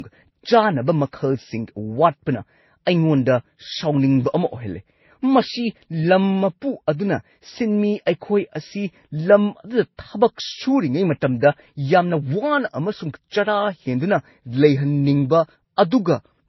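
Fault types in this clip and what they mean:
Transcoding between lossy codecs: the speech sounds as if it likely passed through a low-rate MP3 stage and was then re-encoded as Vorbis at a similarly low rate, around 27 kbit/s. The second encoder spends its few bits reproducing the first one's smearing and swirling artefacts while adding its own, so two kinds of coding grit sit together on the speech. Nothing survives above about 5.8 kHz, and on a spectrogram that shows as a hard, flat ceiling with patchy, blocky energy beneath it.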